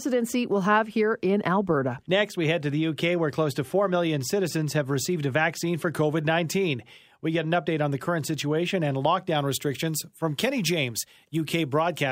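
Speech clip with pre-emphasis left on from 9.35 s, after "the current situation and", to the end. Treble sits about 8 dB high at 10 kHz, fitting an undone CD 50/15 µs boost. It sounds thin, bright and sibilant.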